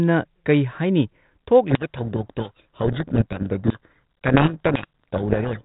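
From 1.7 s to 5.61 s a codec payload misread buries the speech in harsh, rasping distortion. The decoder unpacks each G.726 code word with its bits in the wrong order, so every adaptive step goes astray. A spectrogram shows dense noise filling the band below 4 kHz, and the waveform turns jagged, while the 32 kbit/s G.726 path before 1.7 s carries only light coding damage.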